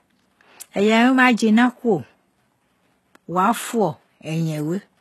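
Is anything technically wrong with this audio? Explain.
Yes. Throughout the speech there is plainly audible codec damage, most likely HE-AAC compression at a very low bitrate, consistent with about 16 kbps. Only the lower spectrum seems to be coded directly. The treble is rebuilt by copying lower bands upward, so its harmonics no longer line up, and s sounds come out gritty and metallic. Nothing remains above 12.3 kHz. Unlike a plain low-pass filter, the top end stays bright rather than dull, but it sounds synthetic.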